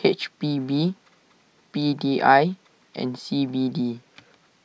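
No technical faults can be heard anywhere in this speech recording. There is nothing to place on the timeline and nothing that needs a technical explanation.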